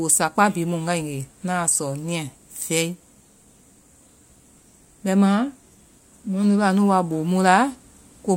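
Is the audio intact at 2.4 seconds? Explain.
Yes, the audio is intact at 2.4 seconds, with no audible fault at that moment.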